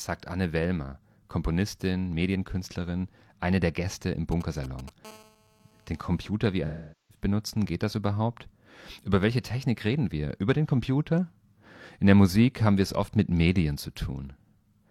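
From 4.32 to 4.90 s you get GSM signalling bursts. A nearby 2G phone is handshaking, sending short clusters of radio pulses that the audio circuit rectifies. It comes through as a galloping dit-dit-dit of brief 217 Hz buzzes, roughly 20 dB under the speech.

Right after, from 5.05 to 6.29 s, it becomes a full GSM phone buzz. The phone is now in a call, pulsing steadily 217 times a second, and that rectified envelope gives a hard, raspy, harmonic-rich 217 Hz drone about 28 dB below the speech, unrelated to what's being said.

Then from 6.66 to 7.24 s there's AAC frame loss with concealment. About 427 ms of audio went missing, which fits roughly ten lost frames. The decoder patched the gap from the last good spectrum, so you hear a smeared, noisy or phasey stretch.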